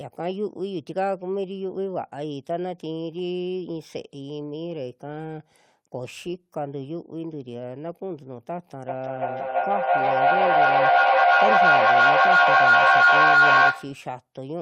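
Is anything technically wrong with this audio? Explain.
Yes. From 8.88 to 14.11 s there is feedback echo between two devices: one device replays the other's microphone, creating repeats about a third of a second apart that build to about 13 dB above the speech, seen as stacked, smeared bands on a spectrogram.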